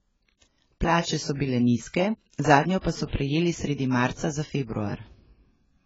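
From start to finish the speech sounds dull and smeared, with a warbling, fizzy texture on sibilants. This is likely AAC compression, and the heavy damage fits an AAC-LC stream at about 16 kbps. A spectrogram would show everything above 7.6 kHz cut away.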